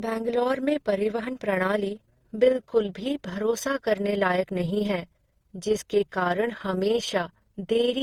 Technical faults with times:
0.00-8.02 overlap-add ripple
0.00-8.02 generation loss

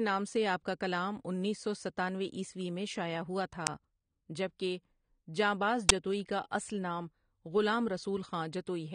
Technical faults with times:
0.00-8.95 AAC compression
3.67 uninitialised buffer
5.89 uninitialised buffer

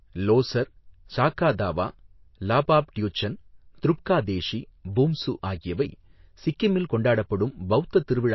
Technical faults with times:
0.00-8.35 MP3 compression

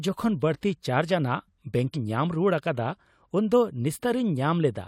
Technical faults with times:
1.91-1.97 damaged data in a compressed stream

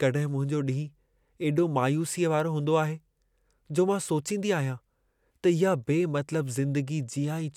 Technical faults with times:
none

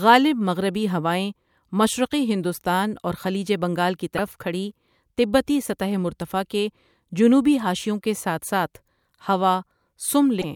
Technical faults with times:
4.14-4.19 damaged data in a compressed stream
10.38-10.44 damaged data in a compressed stream

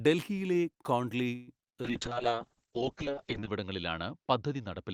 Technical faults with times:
1.35-1.50 call audio freeze
1.62-1.65 short concealed packet loss
1.73-2.15 jitter buffer slow-down
1.84-4.94 call bitrate drop

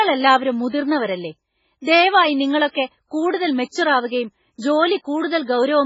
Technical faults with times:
0.00-5.85 MP3 compression

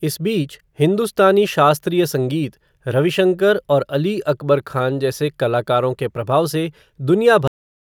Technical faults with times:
7.48-7.85 cut-off end

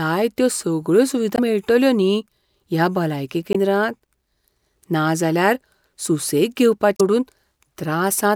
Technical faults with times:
1.35-1.39 damaged data in a compressed stream
3.52-3.57 damaged data in a compressed stream
6.96-7.01 damaged data in a compressed stream

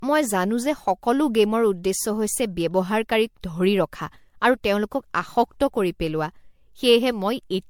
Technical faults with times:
0.00-7.70 generation loss

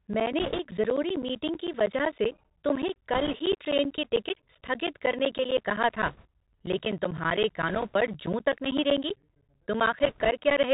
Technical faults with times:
0.00-10.73 Bluetooth CVSD headset codec
0.07-10.64 periodic USB or driver dropouts
0.41-0.59 bit errors on a Bluetooth voice link
3.13-3.34 bit errors on a Bluetooth voice link
6.06-6.26 bit errors on a Bluetooth voice link
7.68-7.96 bit errors on a Bluetooth voice link
10.03-10.30 bit errors on a Bluetooth voice link

